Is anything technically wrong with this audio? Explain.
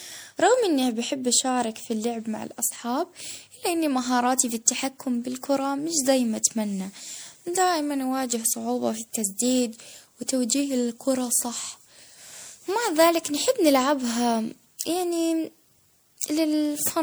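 Yes. Throughout, there's generation loss: the speech sounds swirly, hollow and smeared, with soft attacks, likely from several passes through MP3 at something like 96 kbit/s.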